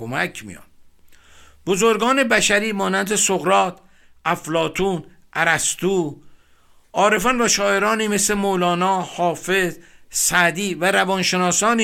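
Speech with no audible technical faults.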